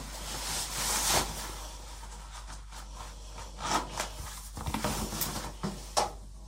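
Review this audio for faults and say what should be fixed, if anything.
Nothing here needs fixing; I listened for trouble in these sounds and didn't hear any, so you can leave it as it is.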